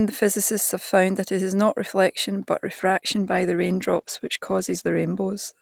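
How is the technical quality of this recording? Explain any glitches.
The recording has one fault. A call bitrate drop starts at 2.75 s and lasts to the end. The encoder coarsens and trims high frequencies, so the speech sounds muffled and rough, consistent with a fall from about 48 to 15 kbps.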